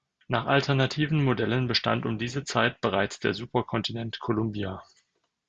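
Nothing in this speech recording stands out as a technical fault, so there's really nothing to flag here.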